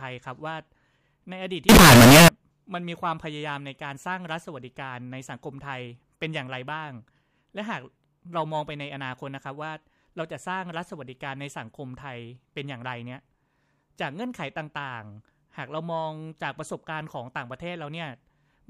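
From 1.69 to 2.28 s the speech turns into loud, harsh distortion. This is likely signed and unsigned mixed up, flipping the top bit of 16-bit samples.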